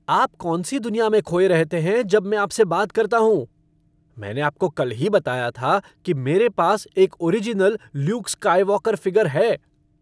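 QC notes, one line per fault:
No technical faults turn up anywhere in the signal.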